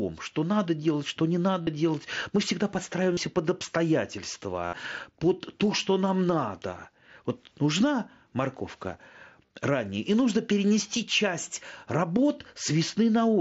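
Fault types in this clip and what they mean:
Concealed Bluetooth headset packet loss: packets dropped between headset and phone, and the receiver filled each gap by repeating the best-matching recent stretch of waveform. The 68 ms patch at 4.66 s turns into a held buzzy tone, with a slight warble as real sound returns.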